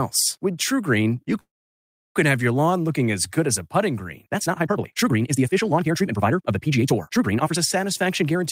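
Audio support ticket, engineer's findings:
Call audio freeze, 1.39–2.17 s, just before "have your lawn looking": brief buzzy tail fading into about 0.69 s of silence, then sound resumes intact, 0.76 s later than it should. Likely jitter buffer underrun from delayed packets. Waveform shows a decaying stub, then a flat line; the spectrogram shows a blank gap.

Time-stretched section, 4.32–7.58 s, after "as a putting green": pace jumps to 1.82× with unchanged pitch, sounding rushed. Likely a pitch-preserving time-scale stretch dropping short chunks. Spectrogram harmonics keep their spacing while syllables compress; the waveform shows small splice discontinuities.

Jitter buffer speed-up, 7.85–8.44 s: audio runs at 122% of normal speed at the same pitch and sounds hurried, with roughly 150 ms trimmed. The receiver cut repeated pitch-period-sized slices to drain excess buffered audio. Spectrogram pitch lines stay level; the waveform shows cycles of unchanged length with tiny seams.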